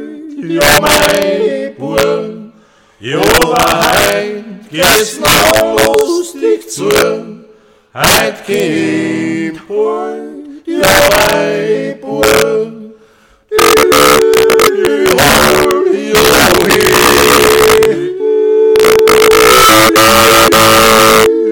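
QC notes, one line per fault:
Throughout: integer overflow. The signal's pushed about 6 dB past full scale, and a few percent of samples land over the limit. Instead of clamping, they wrap around to the opposite sign, so every loud peak snaps into a harsh crack far nastier than ordinary clipping.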